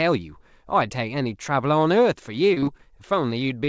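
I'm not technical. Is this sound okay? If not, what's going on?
No, there are two glitches. From 2.54 to 2.81 s there's repeated packet loss, giving a robotic sound: the speech turns choppy as five small gaps get patched over, with bits missing. Then, right at the end, 3.65 to 3.69 s, there's a short stall from a late packet: the last bit of sound is held briefly while the call waited, so it drags a little.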